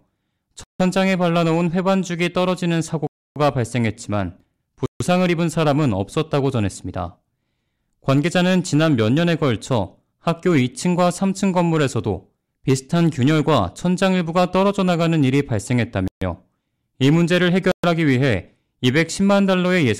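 Speech drops to dead silence at 0.64–0.80, 3.07–3.36, 4.86–5.01, 16.08–16.22 and 17.72–17.84 s, likely a Bluetooth stall in which delayed packets starved the headphone buffer; each shows as a flat waveform gap and a blank vertical band across the spectrogram.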